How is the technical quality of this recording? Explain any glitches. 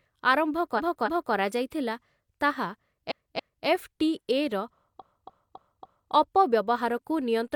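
The recording has a clear technical fault: repeated frames, heard three times. A stretch of compressed frames about 0.28 s long was sent or stored more than once, so the decoder replays the same fragment of speech. From 0.75 to 1.30 s and from 3.07 to 3.63 s it plays two extra times, and from 4.97 to 6.09 s four extra times. The result is a mechanical stutter, and the clip runs longer by about 0.56, 0.56 and 1.11 s.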